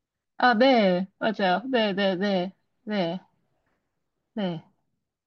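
A short stretch of speech, and nothing technically wrong turns up in it anywhere.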